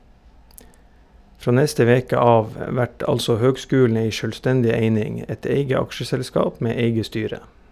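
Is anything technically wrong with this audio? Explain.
No, the speech signal comes through without any technical fault to point to anywhere in the clip.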